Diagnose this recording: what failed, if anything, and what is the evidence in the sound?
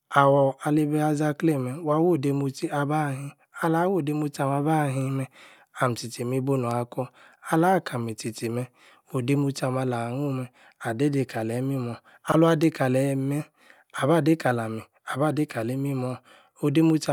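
Chunks out of order at 12.28 to 12.34 s in the speech: a brief jumbled moment. One 20 ms chunk of audio plays two chunks late, after the two that should follow it. Nothing is missing, but the sequence is scrambled, leaving three hard joins where the waveform jumps. The fault sits in the network or buffer delivery stage, where blocks arrived or were written in the wrong order and played without being resequenced.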